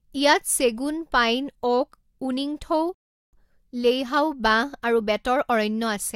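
At 2.94 s the speech cuts abruptly to silence, holds for 0.39 s until 3.33 s, then picks up exactly where it broke off with nothing missing. This is a rebuffering stall: playback ran out of downloaded audio and waited for more, adding 386 ms.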